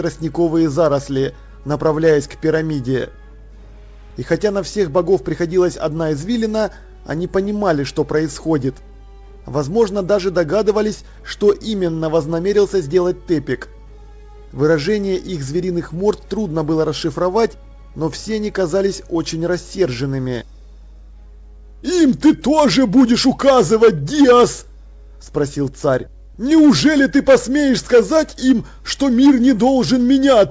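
Nothing in the audio stood out as a problem on listening, and its upper range stops at about 8 kHz, which fits a G.722 call path.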